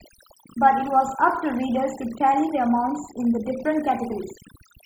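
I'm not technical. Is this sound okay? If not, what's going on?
No. The whole clip has overdone noise removal. Quiet parts of the speech got stripped out too. The pauses are near silent with twinkly specks.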